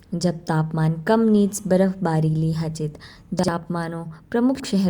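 At 3.39 s and again at 4.55 s the speech shows chunks out of order. In each case a block of about 46 ms arrives one chunk late and plays after its successor. Over 3.39 to 3.48 s and 4.55 to 4.64 s the two blocks are swapped. No audio is lost, but the sound briefly jumbles at the three hard joins between the misplaced segments.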